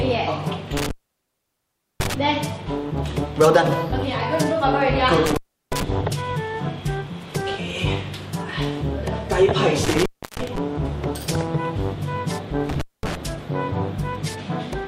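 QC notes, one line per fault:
0.77–2.14 s, 5.26–5.83 s, 9.84–10.58 s, 12.69–13.15 s: intermittent contact. A loose plug or cable keeps opening, for about 1.09, 0.35, 0.31 and 0.22 s, so the sound drops out with crackle at the edges.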